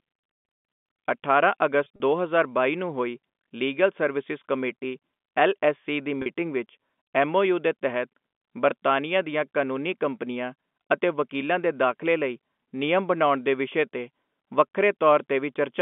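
A brief held, buzzy stutter is audible at 1.84 to 2.00 s, and again at 6.22 s between "ਐੱਲ ਐੱਸ ਸੀ ਦੀ" and "ਵਿੱਚ ਐੱਮ ਓ ਯੂ". This is packet loss with pitch repetition: in the first case, about 80 ms of audio was lost, scattered in runs of up to 40 ms, and in the second case, 40 ms was lost. The receiver filled each gap by repeating the last pitch period.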